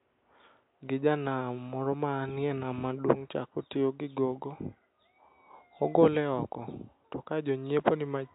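Nothing stood out on listening to the speech, with only faint room noise from the recording space sitting about 47 dB below it.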